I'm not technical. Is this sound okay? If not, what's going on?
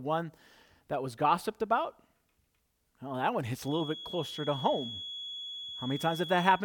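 No. From 3.59 s, after "that one", a thin, steady 3.4 kHz whistle sits quietly behind the speech to the end. This is a feedback whistle, likely from loudspeaker sound leaking into the microphone. Unlike a full feedback howl, it never builds up.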